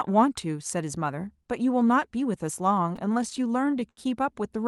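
From 2.89 to 3.99 s, packets reached the receiver late or more slowly than they were played out, so its jitter buffer kept running dry and the result is repeated stalls (stutter). About a dozen times in that span the receiver stretched the last sound to cover the wait, fading it during the longer gaps, the longest about 77 ms. That filling makes up roughly a fifth of the stretch. Nothing is lost, but the speech drags and stutters there, over a band that stops near 12 kHz, as expected from an Opus call path.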